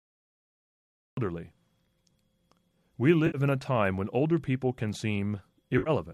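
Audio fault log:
0.00–1.17 s, cut-off start: The clip opens on digital silence, and the speech enters abruptly at 1.17 s partway through a sound, with no natural attack or fade-in. This points to the recording or stream beginning late and clipping off the onset.
3.27–3.38 s and 5.78–5.90 s, AAC frame loss with concealment: About 70 ms of audio is missing at each point, just before "in a time when" in the first case. The decoder, likely a low-delay AAC (AAC-ELD) stream at 64 kbps, fills the gaps by reusing and reshaping the last good spectrum, which produces a smeared, noisy, phasey patch. The second loss is spread over about 80 ms, with its longest gap around 50 ms. Both losses fit roughly seven short codec frames.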